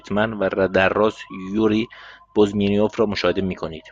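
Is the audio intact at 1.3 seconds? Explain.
Yes, the speech at 1.3 seconds is intact, with no dropout, click, distortion or other fault audible at that moment.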